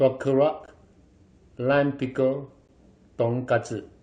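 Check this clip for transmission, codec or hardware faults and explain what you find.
The speech has a gap between stream segments, heard twice: at 0.66 s, lasting about 16 ms, and at 2.68 s, lasting about 12 ms. The two are about 2.0 s apart, which fits 2-second stream segments. At each boundary the time stamps of consecutive segments leave a small hole that the player fills with digital silence. The result is a brief, hard-edged dropout in the speech. Nothing is lost; the following audio simply starts slightly later.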